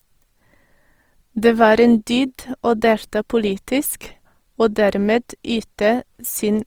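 Throughout, likely Opus compression in CELT mode, consistent with about 24 kbps, makes the speech plainly grainy and rough, with content still reaching 20.3 kHz.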